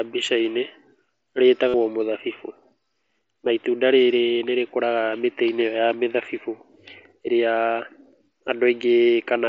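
Concealed Bluetooth headset packet loss hits at 1.68 to 1.74 s and again at 3.27 s. Packets from the headset, carried over the light-sounding mSBC link, never arrived, so the receiver kept looping a recent stretch of waveform. The first gap of about 52 ms, consistent with roughly seven lost frames, comes through as a brief held buzz with a small warble as real speech resumes. The second, about 15 ms, spans two lost frames.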